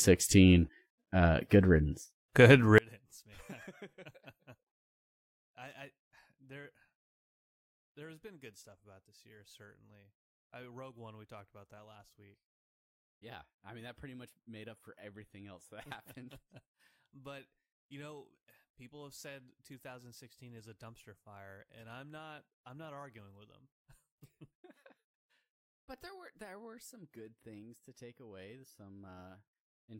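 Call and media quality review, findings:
Speech level collapses at 2.78 s, about 32 dB down, through to the end. What remains is the low residual of a mono fold-down. Likely component: one channel inverted upstream of the downmix. Reversed polarity on one side cancels the content common to both channels when summed, leaving only their mismatch.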